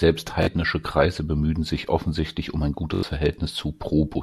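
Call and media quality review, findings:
Repeated buffer at 0.43–0.47 s and 2.94–3.03 s (after "sich offensichtlich um ein"): hard-edged stutter, one 21 ms chunk replayed twice, then four times. Playout underrun, with the device looping its last buffer, which fits 1024 samples. Roughly 40 ms and 100 ms lost.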